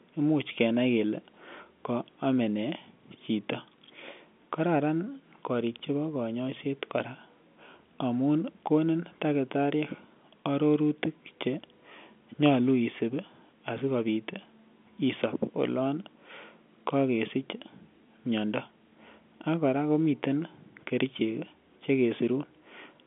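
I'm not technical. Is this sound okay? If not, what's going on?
Yes, it's fine, just ordinary telephone-quality speech.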